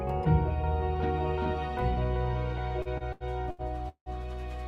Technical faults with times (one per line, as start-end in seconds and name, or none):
2.82-4.09 repeated stalls (stutter)